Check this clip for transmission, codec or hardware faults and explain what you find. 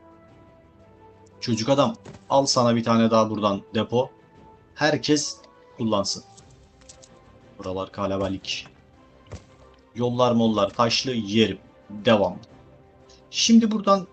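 Nothing wrong turns up here; the audio simply carries the ordinary character of a WebRTC call path, with the top end rolling off around 8 kHz in a way that fits Opus running at a fairly modest bitrate.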